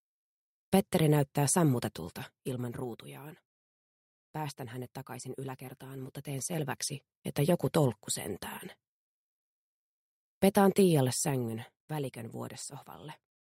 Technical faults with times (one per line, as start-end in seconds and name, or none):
2.05-3.07 zipper noise
5.89-7.42 zipper noise
11.01-11.95 zipper noise